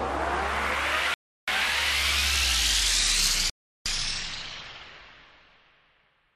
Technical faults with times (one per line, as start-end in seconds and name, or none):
1.14-1.48 rebuffering stall
3.50-3.86 rebuffering stall